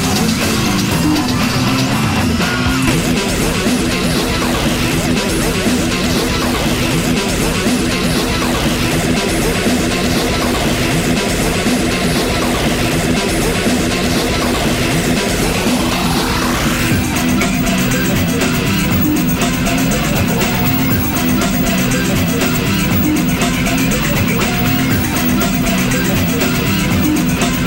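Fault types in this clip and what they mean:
Stream segment skipped: at 2.87 to 2.90 s the audio jumps abruptly forward with a brief blip at the join, losing continuity. The likely cause is one segment of a segmented stream failing to load, with playback resuming from the following segment.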